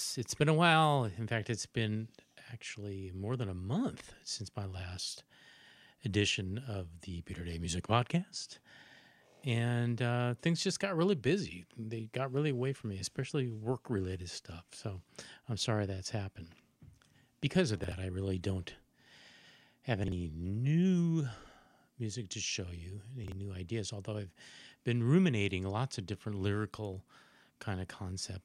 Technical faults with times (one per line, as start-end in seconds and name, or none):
17.84-17.92 chunks out of order
20.04-20.12 chunks out of order
23.24-23.32 chunks out of order